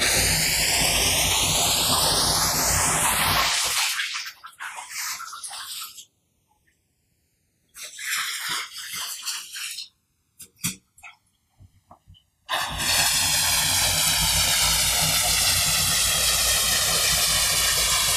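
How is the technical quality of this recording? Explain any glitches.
Technical quality suffers from one fault that runs through the whole recording.

Channels drifting apart, throughout: the two sides run on mismatched clocks, off by roughly 150 ppm, so their offset grows to about 2 ms, and summed to mono the notches sweep as slow flanging.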